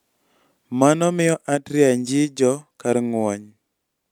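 Nothing in this recording of speech gives away a technical fault; it just runs along as a plain stretch of talking with no glitches to point at.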